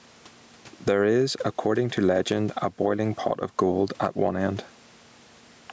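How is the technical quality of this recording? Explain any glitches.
The recording suffers from gain pumping throughout the speech. Input gain was likely set far too high, so a fast limiter keeps clamping down on each loud syllable and letting go in the gaps, swinging the level by around 10 dB. The background sits about 41 dB below the speech. On a waveform the speech peaks look flattened to a near-constant height while the pauses visibly bulge. On a spectrogram the noise floor brightens and darkens in step with the syllables, below a top edge at 8 kHz left by the call's microphone processing.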